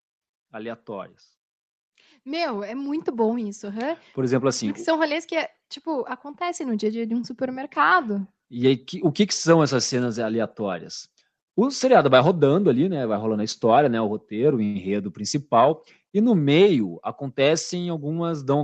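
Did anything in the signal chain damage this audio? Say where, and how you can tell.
Yes. Call processing: automatic gain rising from 0.37 to 4.09 s, with speech and background swelling together by about 11 dB as the AGC chased a quiet input.

Network and jitter buffer: a short stall from a late packet at 14.65 to 14.78 s. The receiver held the last sound for 97 ms until the packet arrived.

Jitter buffer again: speed-up from 16.69 to 18.12 s. Speech runs at 107% with unchanged pitch as about a tenth of a second of pitch periods gets trimmed out.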